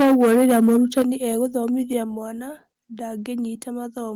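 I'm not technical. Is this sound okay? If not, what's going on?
No. For the first second, up to about 1.02 s, there's microphone overload: the loudest bits sound harsh and crackly, with roughly a fifth of the sound flattened at the top. That's likely because the mic was set too loud, so peaks hit the ceiling.

Then comes microphone volume stepped down, twice: at 1.02 s and again at 2.04 s, everything, voice and background, suddenly gets quieter. It's likely the call software spotting the overload and turning the mic down in jumps, the first drop bigger than the second.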